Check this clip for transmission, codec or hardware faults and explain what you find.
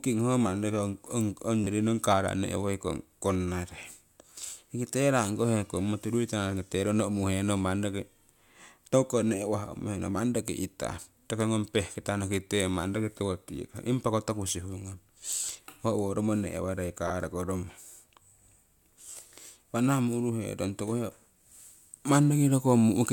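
The speech has four repeated buffer faults, at 1.64 to 1.66 s, 3.80 s, 14.49 s and 17.08 to 17.10 s. Fresh audio arrived late, so the last 10.67 ms block was replayed, which fits a 512-sample buffer. It played twice extra at 1.64 and 17.08 s and once extra at the other two. Each sounds like a brief click or buzz.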